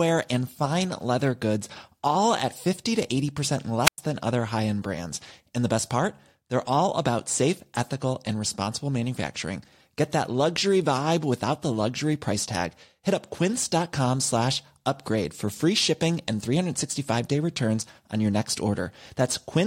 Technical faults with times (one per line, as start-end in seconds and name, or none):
3.84-3.98 wireless microphone squelch dropout